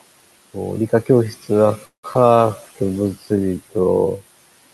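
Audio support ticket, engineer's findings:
Noise suppressor artifacts, whole clip. Room noise sits about 19 dB below speech, and the suppressor pulls it down by about 17 dB between phrases, so the residue pumps. On a spectrogram, the noise floor dips in gaps and shows mottled, flickering bins under speech.

Time-stretched section, 1.21 s to end. Pace drops abruptly to roughly half speed (0.52x) with unchanged pitch, dragging. Likely length-fitting software repeating short segments. Spectrogram: formant patterns elongated, harmonics at the same spacing, repeated grain edges visible.

Call audio freeze, 1.85–2.05 s. Sound holds as a fading buzz or hiss, then about 110 ms of near-silence, 180 ms of inserted fill before the audio resumes with nothing lost. Likely jitter-buffer underrun from delayed packets. Waveform: decaying tail into a flat stretch, then clean resume.

Short concealed packet loss, 2.13–2.32 s. 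About 40 ms missing, with a 13 ms concealment patch giving a brief smear. The decoder extrapolated from the preceding sound and crossfaded back. Spectrogram: a short, blurred slice with a seam at the rejoin.

Call bitrate drop, 2.37–3.87 s. Opus falls from 64 to 26 kbps, bottoming out for about 1.43 s. The sound turns rough and watery, with highs dulled, from the encoder reacting to a lower bandwidth estimate. Spectrogram: the upper band thins or cuts off, and coarse blocky texture appears, recovering afterward.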